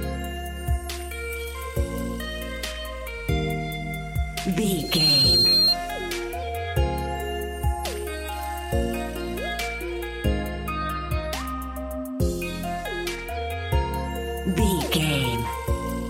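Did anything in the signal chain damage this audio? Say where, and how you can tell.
Yes, loudspeaker feedback squeal in the acoustic path: a 4.2 kHz tone swells over about 0.3 s from 4.76 to 5.77 s, reaching about 10 dB above the audio, as the mic re-amplifies the speaker.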